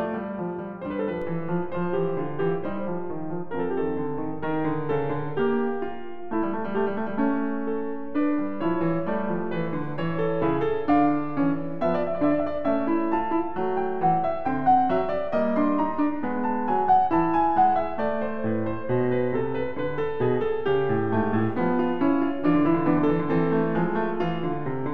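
At 1.22 s a DC step shifts the music's zero line by about -33 dBFS, heard as a single low thump; the offset then holds to the end.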